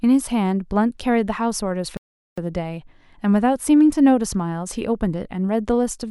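At 1.97 s the speech cuts out mid-flow for 405 ms, a playback stall, likely the player starving for data; the silence is far longer than a dropout's brief gap.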